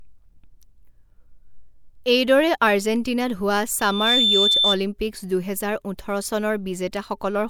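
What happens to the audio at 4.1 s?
At 4.1 s you're inside a loudspeaker feedback squeal, 3.79 to 4.78 s: the mic catches its own speaker, and a 3.6 kHz tone swells within about a third of a second to roughly 5 dB over the speech.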